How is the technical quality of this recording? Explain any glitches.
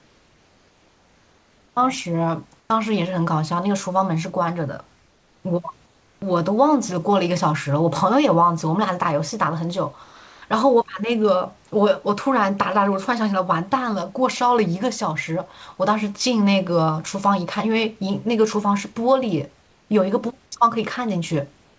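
The recording carries two kinds of call-path glitch, both tied to the sender going quiet during pauses, on top of a band limit with nothing above 8 kHz that points to a wideband call codec.

Comfort noise in place of the background appears at 0 to 1.76 s, 2.60 to 2.70 s, 4.96 to 5.44 s, 5.86 to 6.22 s and 19.62 to 19.90 s. The sender likely stopped transmitting when nothing counted as speech, and the receiver filled each gap with synthetic noise. The room's real background, sitting about 38 to 39 dB below the loudest sound, turns into a flat, featureless hiss. It is usually about 2 to 3 dB quieter, and at 2.60 s about 1 dB louder.

Sound dropped by the voice detector occurs at 10.04 to 10.42 s. The detector likely mistook part of the speech for background and cut transmission, so about 0.37 s of real sound is missing. In its place is the same steady synthetic noise, and the sound comes back once the detector triggers again. 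The result is a short hole where the sound simply vanishes.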